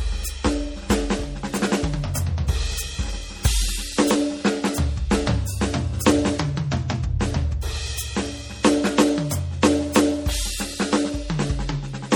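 Across the whole music clip there is plainly audible damage, likely from MP3 compression at a starved bitrate, fitting roughly 48 kbps. The treble is cut hard and weak detail swirls and warbles in and out, which a plain low-pass filter would not cause.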